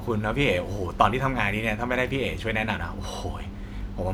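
Nothing stood out on listening to this speech recording.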